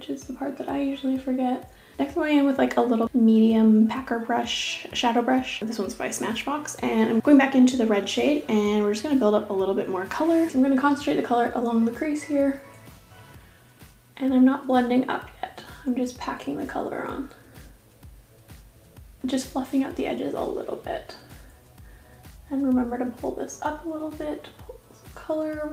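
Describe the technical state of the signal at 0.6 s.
At 0.6 s the audio is intact, with no fault present at that moment.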